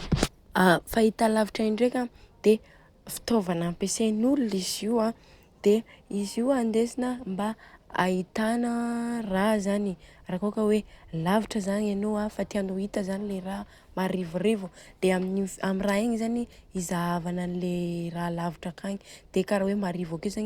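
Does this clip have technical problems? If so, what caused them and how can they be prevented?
No, there are no technical problems to point to in this speech recording. With nothing going wrong, there is no cause to trace and nothing that needs preventing.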